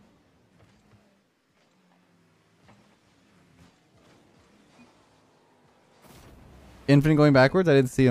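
No technical faults can be heard anywhere in the recording. Nothing interrupts or alters the sound at any point.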